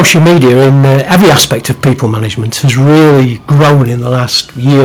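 Harsh, crackling distortion covers the speech from 0 to 2.06 s and again from 2.63 to 3.84 s, with roughly 30% and then 40% of the samples flattened. This is microphone overload, likely caused by input gain set about 16 dB too high, so that peaks slam into the converter's ceiling. At 3.02 s the level drops suddenly by about 3 dB, voice and background together, as the microphone volume is stepped down, probably by the call software reacting to the clipping. The overload persists after the step. Milder crackle returns from 4.11 to 4.36 s, about 6 dB over with only a few samples clipped. Heavy distortion then runs from 4.65 s to the end, about 12 dB over with around half the samples cut flat.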